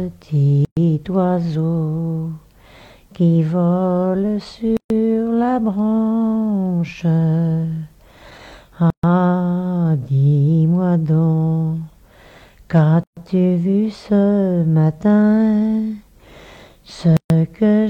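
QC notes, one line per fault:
0.65–0.77, 4.77–4.90, 8.90–9.03, 13.03–13.17 and 17.17–17.30 s: gap at a join of encoded pieces. Silence drops in every 4.0 s. The first lasts 119 ms, the rest 133 ms. Separately encoded segments were joined untrimmed, keeping encoder delay and end padding. Edges are smeared by the codec. Sound resumes where it stopped.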